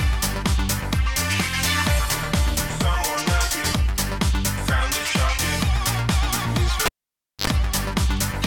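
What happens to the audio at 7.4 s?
At 7.4 s you're near the end of a cable pulled and plugged in, which runs from about 6.86 to 7.47 s. The live lead gets yanked with a pop, the sound drops to near silence for about 0.57 s, then there's a quick burst of 50 Hz mains buzz, about 60 ms, while only the tip is making contact. A second pop marks the plug seating and the audio coming back.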